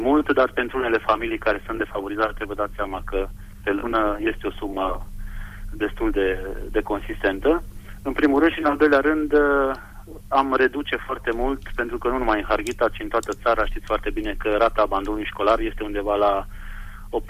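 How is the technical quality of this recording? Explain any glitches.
No technical glitches can be heard anywhere in this recording. There is nothing here that calls for an explanation.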